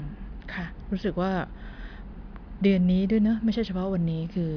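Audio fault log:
Nothing stood out on listening to this speech recording.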